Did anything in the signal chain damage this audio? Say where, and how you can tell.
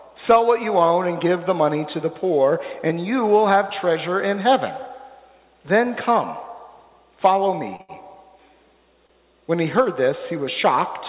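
Yes. There are short stalls from late packets at the network and jitter buffer stage: 7.76 to 7.81 s (33 ms), then straight on to 7.91 s (74 ms), and 9.07 to 9.11 s (26 ms). Each time the buffer ran empty, the last sound was stretched until the packet arrived, so nothing is lost but the sound holds. A spectrogram shows frozen horizontal bands there, and the waveform repeats one cycle.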